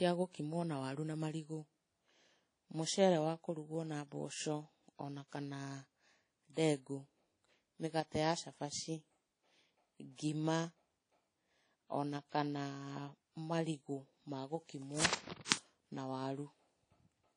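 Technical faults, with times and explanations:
throughout: WMA compression, likely at a low bitrate near 32 kbps, smears quantisation noise over long blocks, giving washy, ringing speech with nothing above 10.1 kHz.
1.14 to 16.81 s: clock drift buffer slips, about fifteen, recur every 1.31 s as a likely mismatch near 150 ppm drops or repeats a few samples, each heard as a click.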